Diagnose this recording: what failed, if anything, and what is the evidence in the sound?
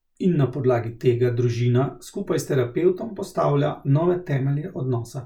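Nothing failed in this recording, and the sound gives no evidence of any fault.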